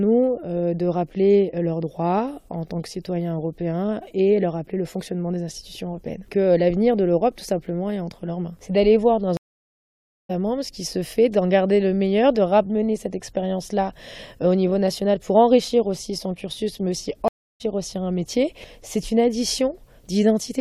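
At 9.37 s and again at 17.28 s the connection drops and the player reconnects with a fresh decoder, a stream reconnect. The sound goes silent for 0.92 s, then 0.32 s, and resumes roughly half a second and 0.3 s further on, skipping material.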